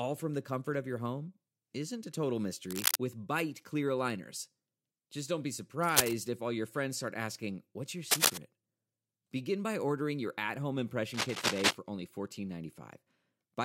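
Speech with cable scratch noise at 2.70–2.97, 5.83–6.13, 8.11–8.38 and 11.14–11.75 s. The rustling bursts sit roughly 5 dB above the speech, likely from a worn connector being moved. They show as ragged broadband smears on a spectrogram and dense, jagged spikes in the waveform.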